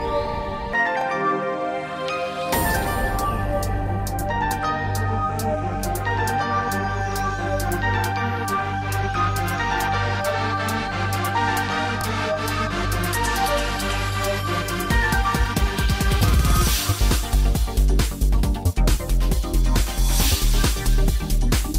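No technical faults can be heard anywhere in the clip. There is nothing to mark at any point in the audio.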